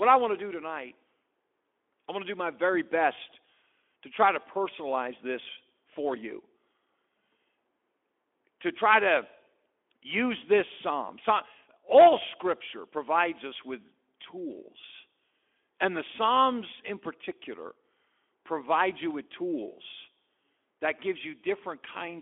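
At 13.53 to 13.56 s comes VoIP packet loss concealed by the speech codec: about 20 ms of audio, consistent with a single lost frame, is replaced by a brief stretched sound that fades in level, unlike a hard dropout to silence, against the light Speex texture of the narrowband line.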